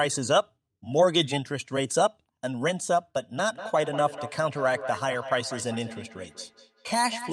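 From 3.39 s to the end, there's feedback echo between two devices: a second device replays this microphone's audio, which gets picked up again, so each sound returns roughly every fifth of a second, peaking about 13 dB below the speech.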